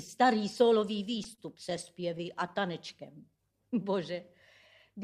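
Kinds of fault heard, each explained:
Repeated stalls (stutter): Between 1.05 and 2.57 s the packets stop arriving on time, so the playback buffer empties 13 times and the receiver holds the last sound each time. The gaps add about 155 ms in all, none longer than 30 ms, and about a tenth of that stretch is filled in. Nothing is lost, but the sound hitches and drags in short, separate catches, not one smooth stretch.
Jitter buffer slow-down: From 3.12 to 3.43 s the receiver builds up its reserve by repeating single pitch periods or bits of pauses, adding 48 ms and playing that passage at about 87% speed. The sound is drawn out at unchanged pitch, without the drop in pitch of a slowed tape. It also lacks the hitches of the earlier stutter.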